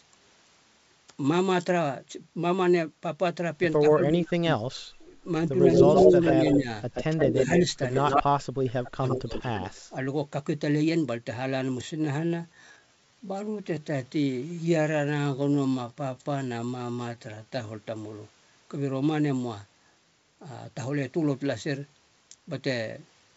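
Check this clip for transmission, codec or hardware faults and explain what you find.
Three kinds of fault turn up in this speech, carried over what sounds like a G.722 call path with nothing above 8 kHz.

Speech suppressed in double talk, at 3.79 to 4.49 s, 6.0 to 6.69 s and 7.33 to 10.03 s: the echo canceller likely mistook overlapping talk for loudspeaker echo and turned the talker down. The level dips by as much as roughly 35 dB, for about one and a half seconds of the last stretch, while the first two dips are shorter and shallower.

Echo leak, at 5.74 to 8.22 s and 9.08 to 9.66 s: a far-end echo canceller likely failed to remove its loudspeaker pickup, so the voice returns as a delayed copy. The first echo trails by 128 ms at roughly full level, and the second by 102 ms, about 10 dB quieter.

Time-stretched section, from 11.88 to 17.70 s: the audio was likely stretched to fit a length by repeating short pieces. 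It plays at 0.718 times normal speed, so the pace abruptly slows while the pitch stays put.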